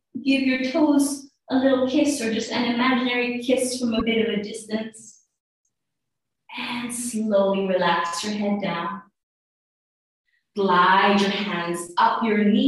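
At 3.99 to 4.02 s the sound skips forward with a brief glitch, about 30 ms long, a little over one 26.1 ms MP3 frame. This points to a broken MP3 bit reservoir, the likely cause. Frames were lost at that point, so the frame that followed reached back for data it had stored in earlier frames and decoded bytes from the wrong frame instead.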